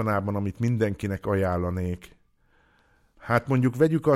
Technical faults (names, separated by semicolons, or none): none